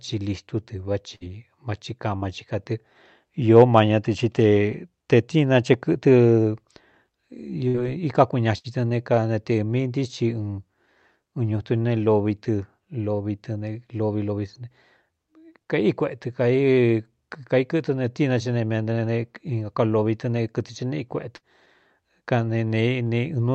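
Five short dropouts break the speech at 1.15–1.23 s, 2.16–2.25 s, 7.68–7.77 s, 8.58–8.67 s and 21.36–21.44 s. Each sounds like a brief smeared hold, a buzz or hiss that fades before the talker jumps ahead. These are bursts of packet loss. Consecutive packets never arrived, so the receiver stretched the last sound for 50 to 63 ms while turning it down, then resumed with about 60 ms of speech gone. The call path's upper band stops near 8 kHz.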